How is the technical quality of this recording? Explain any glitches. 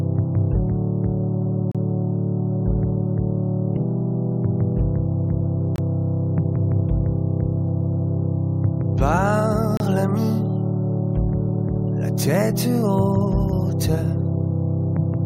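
The recording has three brief dropouts. A gap between stream segments occurs at 1.72 s, 5.76 s and 9.77 s, lasting about 33, 24 and 30 ms. Timestamps between consecutive 2-second segments leave a small gap, which the player fills with silence, so the sound stops abruptly with hard edges and resumes without any lost material.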